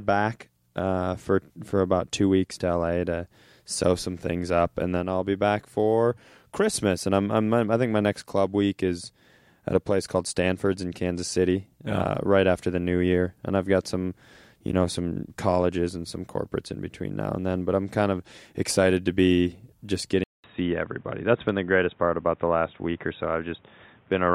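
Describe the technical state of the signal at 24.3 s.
At 24.3 s the audio is in the band-limited state of an input switched to a poorer device, likely a fallback microphone or headset call profile. From 20.24 s, after "excited to be just" and a 200 ms gap, the sound turns dull and boxy with new background noise roughly 35 dB down, at much the same level. A spectrogram shows nothing above 3.8 kHz, and the waveform a brief flat gap at the switch.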